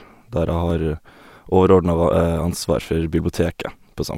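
In this speech recording a slight jump in the sound at 0.70 s is likely a dropped buffer (overrun), a tiny slice lost and the two sides joined directly.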